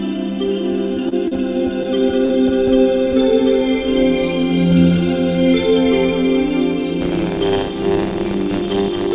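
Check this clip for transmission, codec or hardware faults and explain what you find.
Three kinds of fault appear, on a call path whose band stops at 4 kHz, which fits G.711 mu-law.

At 1.09–1.15 s, a short stall from a late packet: the jitter buffer ran dry and held the last sound for 30 ms. Unlike packet loss, nothing is skipped.

At 1.28–1.34 s and 2.25–2.32 s, short concealed packet loss: 40 ms never arrived and was filled by extrapolation. It is heard as a brief smear where real audio is missing.

From 7.00 s to the end, buffer tearing: writer and reader crossed inside each period, splicing in roughly a tenth of audio about 40 ms old. The result is a steady 100 Hz rattle rather than isolated glitches.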